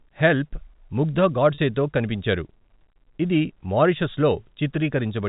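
At 1.54 s, just after "'హెల్ప్' ముగ్దా", about 40 ms of the stream went missing, which fits two lost 20 ms packets. The receiver covered the gap with packet loss concealment by pitch repetition, looping the last pitch period of the speech until real audio resumed at 1.58 s with "తో కనిపించారు". Because the gap is so short, it comes across as a brief held, slightly buzzy sound rather than a dropout. The surrounding G.711 telephone coding keeps its narrow telephone bandwidth throughout.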